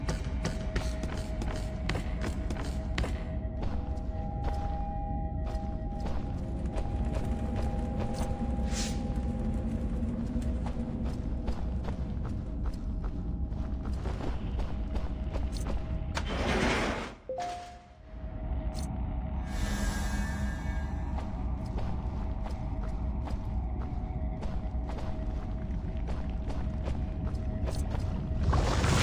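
No technical faults are audible.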